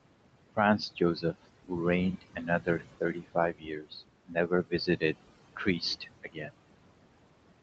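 Throughout the clip the background sinks away between phrases and swells back under them. These are noise suppressor artifacts: the room noise, which sits about 13 dB below the speech, is pushed down by about 21 dB frame by frame, and that gating is what makes the noise pump.

From 2.12 to 6.51 s, parts of the speech itself sound swallowed and faint. This is speech cut by the noise suppressor, which mistook quieter speech for noise. It happens across 2.12–2.83 s (about 17 dB deep), 3.0–3.94 s (about 21 dB), 4.27–5.26 s (about 20 dB), 5.56–5.82 s (a lighter dip of about 8 dB) and 6.0–6.51 s (about 19 dB). In each span roughly 100 to 500 milliseconds are turned down along with the background.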